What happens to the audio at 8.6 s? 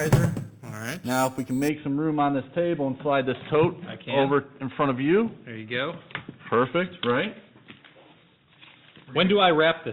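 Nothing goes wrong at 8.6 s; the audio plays through that moment intact, with no dropout, click or other fault.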